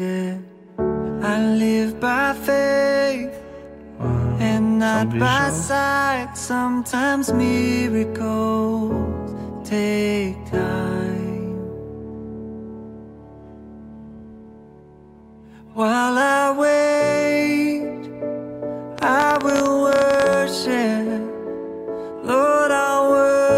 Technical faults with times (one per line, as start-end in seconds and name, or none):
18.98-20.34 train of clicks